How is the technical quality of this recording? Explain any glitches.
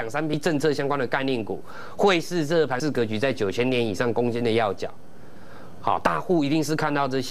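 The recording has three brief glitches from damaged data in a compressed stream, at 0.34, 2.80 and 6.06 s. At each point corrupted bytes make the decoder misread a frame and resynchronise, giving a short blip. Spectrograms show thin broadband vertical streaks.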